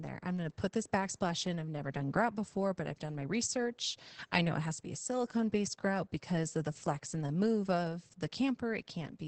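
Opus voice compression runs through the whole speech clip, from start to finish. The coder works in its SILK linear-prediction mode at wideband, so nothing survives above about 8.4 kHz, and the excitation is coded coarsely in 20 ms frames. The damage is heavy, which fits a bitrate around 10 kbps. The voice sounds muffled and hoarse with a slightly robotic edge, because the fine detail of the signal has been thrown away.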